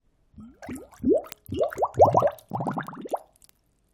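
From 0.11 s onward, word clock ticks click about every 40 ms, as an unlocked clock slips one sample each time, drawing thin vertical spectrogram lines.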